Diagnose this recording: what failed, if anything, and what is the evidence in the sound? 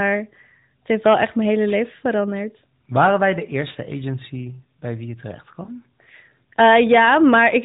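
Hard clipping at a converter or gain stage. From 2.98 to 3.07 s, just before "wij de", peaks are driven about 5 dB past full scale and cut flat. It returns from 6.59 s to the end, about 6 dB over. The flattened tops add high harmonics, heard as harsh crackle on loud syllables.

Lost AMR speech frames on the network path. At 5.64 to 5.70 s, right after "bij wie je terecht", there is a brief dip or warble. That fits a single 20 ms frame failing its check, with the AMR-NB decoder briefly reusing the last good frame's settings at lower gain before normal decoding resumes.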